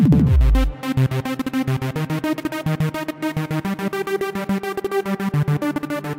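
No technical faults are audible.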